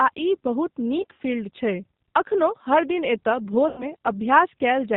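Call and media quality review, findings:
G.729 codec, throughout: nothing above 4 kHz, rough synthetic timbre fitting 8 kbit/s CELP coding. Constant, unlike loss artefacts, which come and go.

VoIP packet loss concealed by the speech codec, 0.98–1.21 s and 3.68–3.85 s: stretched buzzy tone or coloured noise fading down, weak recovery after. Decoder extrapolation, not the hard silent gaps of unconcealed loss.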